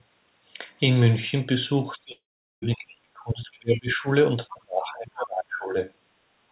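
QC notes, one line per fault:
1.96–4.06 s and 4.50–5.76 s, speech suppressed in double talk: the talker's level sinks by about 25 dB in the first stretch and about 30 dB in the second. The likely cause is an echo canceller that, with both sides talking at once, couldn't tell this talker apart from the returning loudspeaker echo and attenuated everything it heard.
2.12–2.64 s, long network dropout: about half a second of audio never arrives, landing inside the first suppressed stretch. The receiver briefly stretches the last sound into a decaying buzz, then leaves about 0.4 s of silence before sound resumes further on, with the missing portion simply gone. This pattern likely points to a network outage that outlasted the jitter buffer's concealment. Nothing above 4 kHz is present, as expected from the G.711 mu-law call path.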